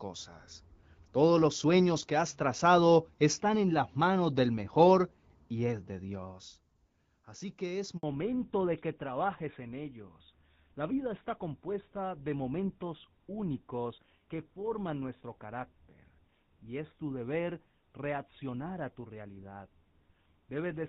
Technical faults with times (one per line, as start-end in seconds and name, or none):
7.97-8.03 handover gap
8.03-20.89 fallback to narrowband